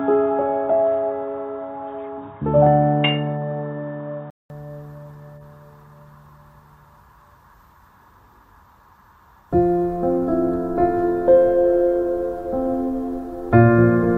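Dull and boxy from 0.0 to 4.50 s, with nothing above 3.8 kHz, then clearing after a 200 ms silence: likely an input switched to a poorer device.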